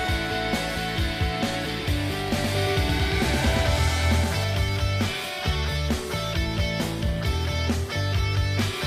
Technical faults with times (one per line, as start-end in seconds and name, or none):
2.38-4.44 doubled audio track